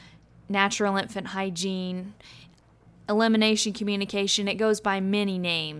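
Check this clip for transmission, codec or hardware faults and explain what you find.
Nothing in the transmission, codec or hardware chain shows up as a fault in this speech clip.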